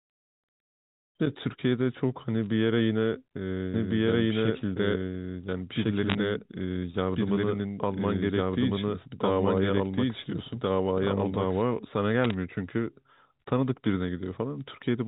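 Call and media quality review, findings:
Bit errors on a digital phone line: short bursts of crackle and sharp ticks at 2.42–2.48 s, 6.10–6.15 s and 12.24–12.34 s. Flipped bits corrupt single samples on the G.711 mu-law path, at a low error rate.

Doubled audio track: from 3.74 s to 11.62 s a second, full-band copy of the speech runs about 1.5 s behind at roughly equal level. It has no room colour and starts and stops abruptly, likely from a second, slower capture path being mixed in.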